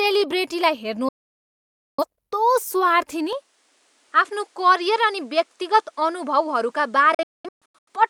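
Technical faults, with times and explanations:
1.09–2.04 s, digital broadcast dropout: the sound mutes within 3 ms for about 0.9 s as bad frames are discarded. It is a clean hole, not a fade or a change of tone.
3.33 s to end, input switched to a poorer device: with no gap and no level jump, the sound turns duller, losing everything above 11.4 kHz, and gains new background noise about 40 dB down. This is likely a change of input device.
7.14–7.89 s, digital broadcast dropout: several short muted holes, the longest 0.21 s, totalling about 0.55 s over 0.73 s. The sharp 3 ms cuts mark lost frames rather than signal fade.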